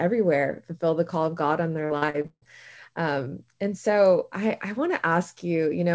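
From 1.86 to 2.44 s, between "call of god on" and "um and so i", repeated packet loss (robotic sound) makes the speech choppy, with pieces missing. Several holes, the longest about 155 ms, are filled by stretching the last sound. That covers over half the span and shows as smeared, repeating bands on a spectrogram and looped, uniform chunks in the waveform.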